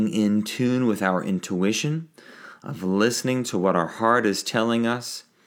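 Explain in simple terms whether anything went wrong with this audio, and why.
Nothing went wrong with this speech recording: the signal stays steady and continuous all the way through, with no technical faults to be heard at any point.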